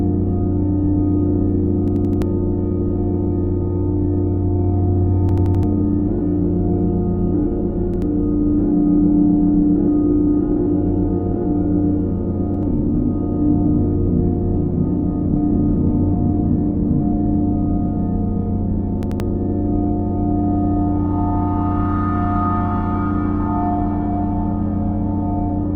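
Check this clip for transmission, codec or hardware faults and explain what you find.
Repeated buffer faults occur five times. The same 85 ms chunk stutters four times at 1.88–2.22 s and 5.29–5.63 s, twice at 19.03–19.20 s, and once at 7.94–8.02 s and 12.54–12.63 s, each joined hard. Audio arrived late, so the device replayed its last buffer, which fits a 4096-sample buffer. This lost about 300, 100 or 150 ms of sound each time.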